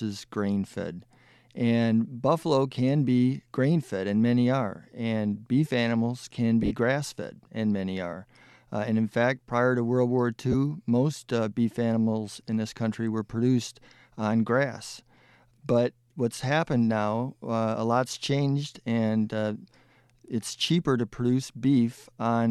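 At 6.63 s and 10.52 s, lost LE Audio frames make the speech smear briefly into noise. The decoder repeats the last spectrum with randomised signs: about 60 ms lost, then 20 ms.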